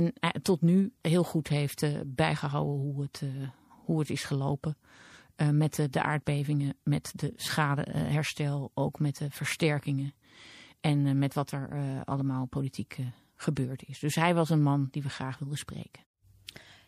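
Plainly audible MP3 compression runs throughout the speech, sounding swirly and watery, which fits about 64 kbps. A spectrogram would show a hard treble ceiling with flickering gaps.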